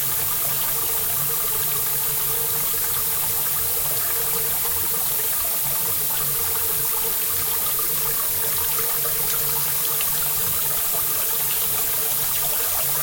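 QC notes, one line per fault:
Throughout, low bit depth with noise shaping: there's a steady, thin hiss riding under the everyday sounds the whole way, only around 15 dB down from the sound itself, which fits a 3-bit signal. With that few levels the rounding error is large, and the shaping loop feeds it back so it's pushed up the spectrum. That's why the hiss leans toward the top of the band rather than sitting flat.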